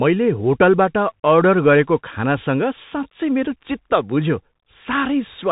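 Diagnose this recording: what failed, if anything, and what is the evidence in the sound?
Bluetooth CVSD headset codec damage runs throughout the speech, a fault at the codec stage. Nothing passes above 3.8 kHz, s sounds turn scratchy, and a granular hiss lies underneath. This fits one-bit delta modulation at 64 kbps, whose adaptive step cannot follow loud, fast high-frequency detail.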